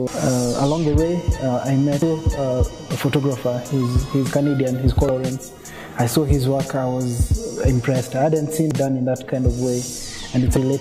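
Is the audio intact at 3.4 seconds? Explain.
Yes, the audio at 3.4 seconds is intact, with no dropout, click, distortion or other fault at that moment.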